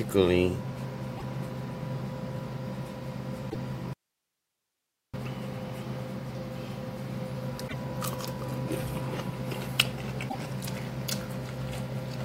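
At 1.14 to 1.23 s a short glitch breaks in, the first sign of damaged data in a compressed stream. Corrupted bytes made the decoder misread its frames, lose sync and hunt for the next valid header. On a spectrogram each burst is a narrow vertical smear of broadband, disordered energy. The waveform shows a brief jagged section out of character with its surroundings.

The same glitch returns at 3.46 to 3.55 s. Soon after, at 3.93 s, the sound drops out abruptly and stays gone for about 1.2 s until 5.14 s. This is an audio dropout to a faint residue, most likely a lost input signal while the path after the break stayed live. Only hiss remains, around 50 dB below the normal level. The waveform collapses to a thin flat band with hard edges at both ends, and the spectrogram shows a dim, even noise floor.

Further damaged-data blips follow at 7.64 to 7.74 s and 10.26 to 10.35 s, each another brief glitch.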